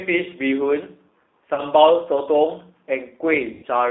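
The speech runs through a G.729 codec throughout, and its sound points to the 8 kbit/s G.729A variant. The codec doesn't carry the waveform itself. It sends a vocal tract filter, a pitch predictor and a sparse set of pulses, and the decoder rebuilds the speech from those. The line band runs only from about 250 Hz to 3.7 kHz, so the speech sounds thin, and the codec damage is plainly audible as a rough, slightly synthetic quality.

At 1.54 to 1.62 s, VoIP packet loss is concealed by the speech codec. About 40 ms of audio went missing, which fits two lost 20 ms packets. The decoder filled the gap by repeating its last pitch and filter at falling gain, so the speech there smears into a short buzzy tone or coloured noise that fades. It stays weak or distorted for a moment afterwards, because each rebuilt frame depends on the one before.

The same concealment happens again at 3.53 to 3.66 s. 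This time about 100 ms was lost, which points to five packets. The decoder has to extrapolate for much longer, so the smeared sound lasts audibly longer and decays further before real packets arrive. Recovery after the gap is sluggish, with the speech still distorted as the codec's internal state catches up.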